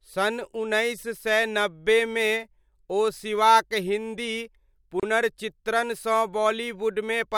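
A gap at a join of encoded pieces opens from 5.00 to 5.03 s, a silence of about 31 ms cutting into otherwise continuous speech. The audio was encoded in separate pieces and spliced without trimming, so the encoder's start-up delay and the padding of the previous piece's final frame both remain at the seam. The codec smears the edges of the dropout, and the speech then resumes exactly where it broke off.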